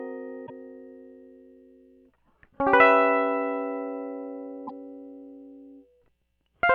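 A piece of music interrupted twice by a short glitch, from 0.43 to 0.50 s and again from 4.64 to 4.71 s, each about 70 ms long. Both are damaged data in a compressed stream: corrupted bytes make the decoder misread frames and lose sync until it finds the next valid frame header.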